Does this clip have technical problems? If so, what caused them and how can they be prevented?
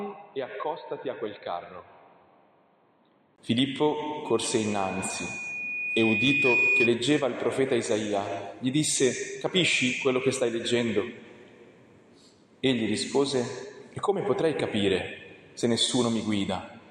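Yes. From 0.0 to 3.38 s the sound is dull and boxy, with nothing above 4.3 kHz, about 10 dB quieter, and carrying a faint background hiss of its own. A 20 ms gap at 3.38 s precedes full-band sound, which likely means the input switched to a poorer device. The simultaneous change in level and noise, plus the gap, tells it apart from a simple filter or EQ change. Locking the recording input to one chosen microphone, and keeping headsets from taking over in call mode, prevents it.

From 4.25 to 6.95 s there is loudspeaker feedback squeal: a single 2.5 kHz tone swells over about two seconds until it sits about 5 dB above the wanted sound. The microphone is picking up a loudspeaker it feeds, and the loop gain exceeds one at that frequency. The steady build-up sets it apart from a fixed whine or hum. Lowering monitor gain, using headphones, or moving the microphone away from the speaker prevents it.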